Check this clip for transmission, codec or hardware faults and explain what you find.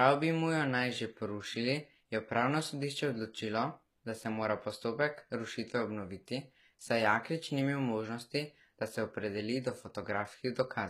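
One codec fault runs through the whole clip.

HE-AAC compression, throughout: the upper range of the speech sounds bright but synthetic, with gritty, lispy s sounds. This likely comes from spectral band replication, which copies lower bands upward under a coarse envelope, consistent with a bitrate near 20 kbps.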